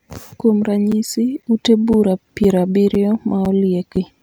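Gap between chunks at 0.41, 0.92, 1.42, 1.93, 2.44, 2.95, 3.45 and 3.96 s: 7 ms of silence after each 0.5 s chunk cuts the speech with hard-edged holes.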